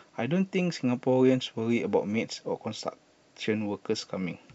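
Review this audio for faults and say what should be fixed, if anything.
No faults turned up in this audio, so nothing needs to be fixed.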